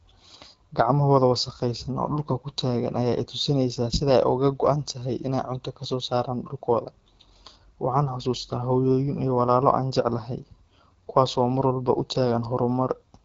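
From start to end, the speech carries AMR wideband (HD Voice) codec damage. It is plainly audible: rough and raspy, which fits AMR-WB at about 8.85 kbit/s. Nothing reaches above 7.5 kHz, and the top band sounds noise-filled rather than detailed.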